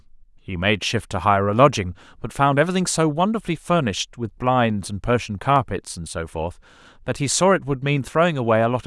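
A single sharp click at 5.56 s interrupts this speech clip, showing as a thin vertical line across the spectrum. It is likely dropped samples: a handful missing, well under a millisecond, so the waveform jumps abruptly without any audible gap.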